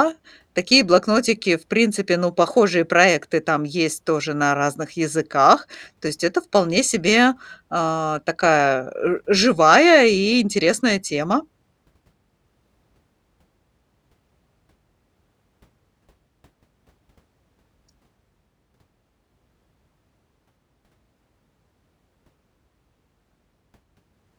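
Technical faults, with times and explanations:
Nothing technical stands out in this speech recording; there's nothing here to flag.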